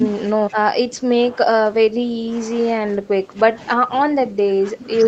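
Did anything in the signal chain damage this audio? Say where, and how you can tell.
Yes. In call processing, speech was suppressed in double talk, likely by an echo canceller, ducking it by up to about 15 dB at 0–0.05, 0.25–2.58 and 2.75–5.08 s.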